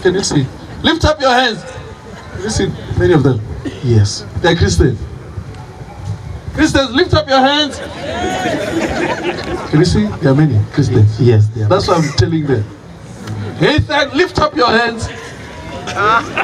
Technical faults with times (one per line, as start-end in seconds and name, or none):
0.00-16.44 gain pumping